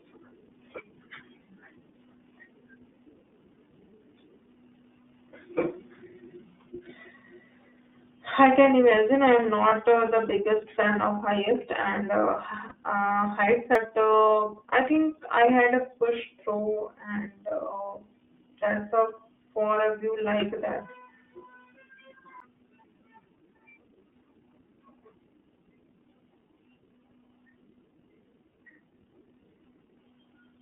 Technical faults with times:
0.00-30.61 iLBC codec
9.68-9.73 lost iLBC frames
12.69-12.72 lost iLBC frames
13.75 CD skip
14.68-14.73 lost iLBC frames
22.40 CD skip

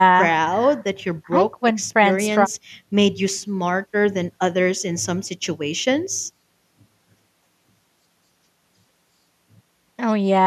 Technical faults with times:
none

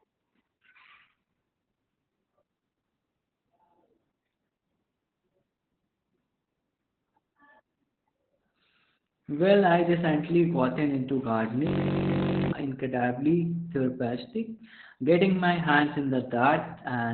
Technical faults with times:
0.00-17.13 Opus voice compression
11.67-12.52 system hang loop

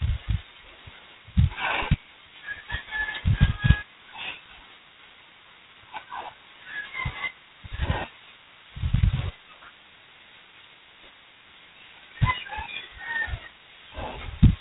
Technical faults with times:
0.00-14.61 G.726 ADPCM

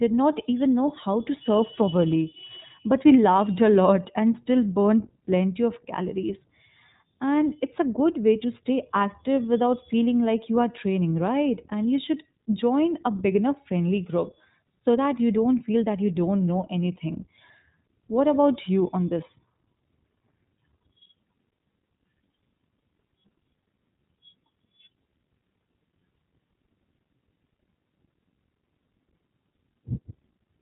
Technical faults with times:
0.00-30.61 iLBC codec

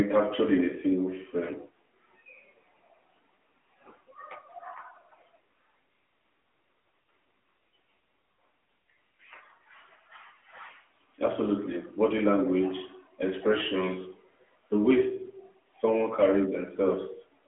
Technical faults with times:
0.00-17.48 AMR narrowband mobile codec

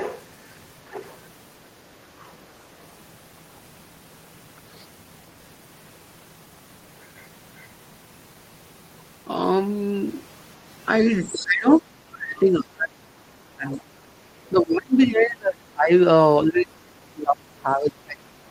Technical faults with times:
0.00-0.24 other side's voice leaking through
0.89-1.19 other side's voice leaking through
2.19-2.32 other side's voice leaking through
10.98-11.45 other side's voice leaking through
11.42-13.95 speech suppressed in double talk
13.71-13.76 other side's voice leaking through
14.52-15.91 speech suppressed in double talk
16.44-18.50 speech suppressed in double talk

